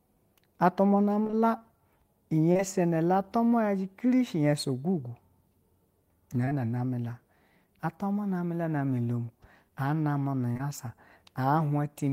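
A speech clip with two kinds of dropout. From 1.23 to 1.35 s there's repeated packet loss, giving that robotic sound: three gaps, about 60 ms missing in total, none longer than 20 ms. The receiver keeps papering over each hole by stretching the last sound, so nearly half that stretch is filler and it comes out choppy. Then you get short concealed packet loss in back-to-back pairs at 2.53–2.61 s, 6.45–6.53 s (right before "na name la") and 10.53–10.61 s. Each pair is two 20 ms packets that arrived too late and were filled by continuing the previous sound, so each spot has a brief smear or wobble.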